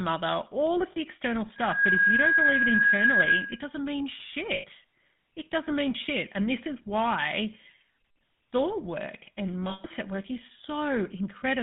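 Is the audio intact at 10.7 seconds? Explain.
No. At 10.7 seconds, as throughout the whole recording, the speech carries GSM full-rate codec damage, and it is plainly audible. The codec rebuilds the voice from a vocal-tract model excited by regularly spaced pulses, discarding most of the excitation detail, which gives a buzzy, gravelly roughness consistent with a 13 kbps coder. The band is confined to roughly 150 Hz to 3.6 kHz, so the audio sounds thin and muffled.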